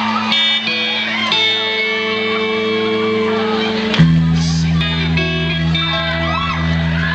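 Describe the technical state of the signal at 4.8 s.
At 4.81 s the playback jumps forward by roughly half a second: compressed frames skipped. The gap points to about five frames of 92.9 ms that were missing or rejected by the decoder. With a lossy codec, overlap between neighbouring frames turns the join into a short smeared blip; with a lossless one the frames meet in a hard click.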